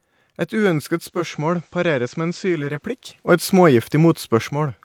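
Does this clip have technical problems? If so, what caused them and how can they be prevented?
Yes. From 0.97 s to 2.89 s the speech turns quieter, dropping about 2 dB, and gaining a faint hiss roughly 40 dB below the signal. This is digital radio blending to analogue: the receiver lost the digital stream and cross-faded over about 0.4 s to the station's FM broadcast, then faded back. Better reception, through a stronger antenna or a better receiver position, prevents the fallback.

At 3.28 s the speech and its background noise abruptly rise together by 6 dB, then fall back just as abruptly at 4.48 s. That is a sudden gain jump, likely caused by a digital gain setting being switched instantly rather than ramped. Applying every gain change with a short fade of a few milliseconds prevents it.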